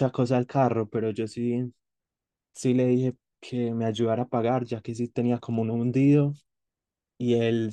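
Listening to this speech recording, nothing stood out as a technical problem at any point.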